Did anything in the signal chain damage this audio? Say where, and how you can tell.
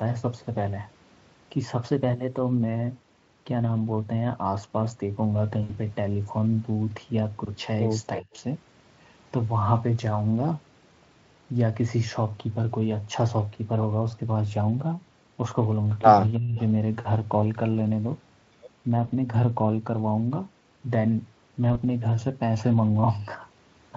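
Yes. A likely drift correction step in the playback buffer stage: from 1.92 to 2.63 s the speech runs about 5.4% fast and sits roughly 90 cents sharp, close to a semitone. Tape wow wanders continuously; this is one clean step.

VoIP packet loss concealed by the speech codec, a network fault, at 5.63 to 5.76 s and again near 19.07 and 21.73 s. The first gap is 60 ms, which fits three lost 20 ms frames. The others each fit a single frame. The decoder stretches the last sound into a fading buzz instead of leaving a clean silent dropout.

Speech suppressed in double talk at 8.20 to 8.28 s and 16.36 to 16.59 s, likely from the call's echo canceller ducking the talker while the far side spoke. The level dips by around 20 dB with no buzzy smearing, which separates it from packet-loss concealment.

An echo leak at 16.58 to 16.63 s, right as the second dip ends, likely from an incompletely cancelled loudspeaker path. 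A faint copy, roughly 35 dB down, arrives 318 ms late. Room reverberation would blur the sound continuously; this is a discrete, delayed repeat.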